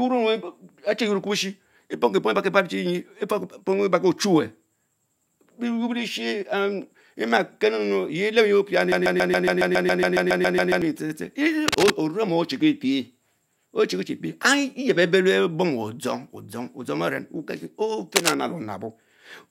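From 8.92 to 10.82 s, a broken-record loop appears, likely because the player or stream stalled and kept resending its last held fragment. A 0.14 s slice of speech repeats exactly fourteen times back to back, stuttering mechanically while the audio belonging there is lost.

At 11.68 to 11.94 s and again at 18.16 to 18.34 s there is cable scratch noise, likely from a worn cable, connector or control being moved so its contact resistance jumped. Dense, uneven scratching bursts roughly as loud as the speech rustle over it briefly.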